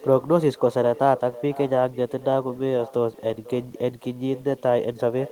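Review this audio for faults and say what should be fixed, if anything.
Echo with no canceller, throughout: the far end's loudspeaker feeds its microphone, returning the speech about half a second later at about 18 dB down. Enable acoustic echo cancellation on the far-end device, or have that listener use headphones.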